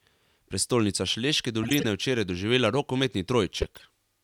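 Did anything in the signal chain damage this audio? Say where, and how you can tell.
Yes. The damage happens at the codec stage, as corrupt frames that were decoded anyway. Two bursts of chirpy noise appear, from 1.63 to 1.85 s and from 3.62 to 3.82 s, each peaking around -15 dBFS. Flipped bits across several consecutive compressed frames made the decoder put energy at the wrong frequencies.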